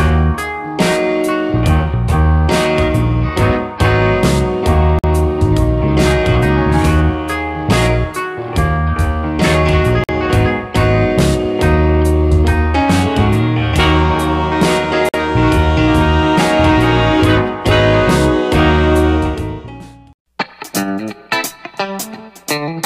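The audio was delivered in chunks of about 5 s, and silence was left between consecutive chunks at each join, as a player that starts each piece late or codec padding would leave. This gap between chunks opens four times, each lasting 50 ms: 4.99–5.04 s, 10.04–10.09 s, 15.09–15.14 s and 20.14–20.19 s. Nothing is lost from the audio itself, but every 5 s it stops dead and resumes, producing short, hard-edged holes at a steady rhythm.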